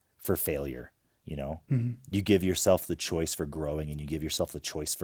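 Nothing to flag here: the speech simply passes through Opus voice compression doing its ordinary job, and there isn't a single fault to point to.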